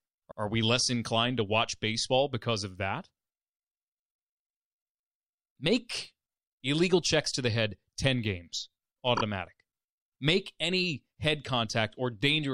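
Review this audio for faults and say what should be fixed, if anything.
Two short stutters break the speech: at 0.30 s a 78 ms stretch plays twice, and at 9.16 s a 26 ms stretch plays three times. These are repeated frames. Blocks of compressed audio were written or delivered more than once, and the lengths fit three frames and one frame. To prevent this, deduplicate frames by sequence number or timestamp before decoding or writing the file.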